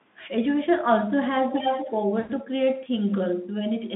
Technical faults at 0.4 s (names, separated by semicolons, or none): none